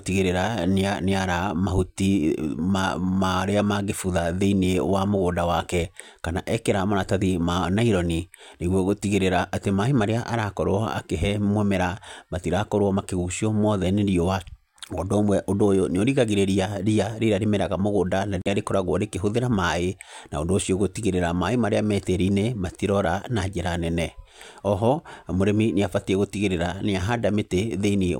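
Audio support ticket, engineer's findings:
Dropout, 18.42 to 18.48 s: speech cuts to silence for 42 ms, then resumes. Waveform shows a flat gap; spectrogram a vertical blank band across all frequencies. Likely Bluetooth stall: interference delayed packets, headphone buffer ran empty until retransmits arrived.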